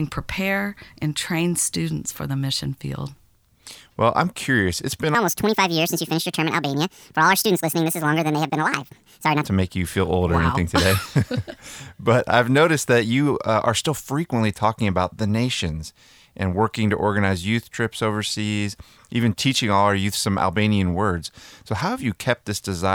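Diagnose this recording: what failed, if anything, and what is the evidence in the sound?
Section at the wrong speed, 5.15 to 9.44 s, before "to make you feel". Speech runs 1.65 times fast, about ten semitones higher. Likely a playback clock mismatch.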